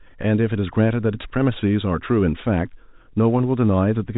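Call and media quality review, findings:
No faults found in the speech. The G.711 telephone coding path is audible as the expected telephone band with nothing above 4 kHz, and any quantisation noise is faint and tracks the speech level, which fits 64 kbps mu-law working normally.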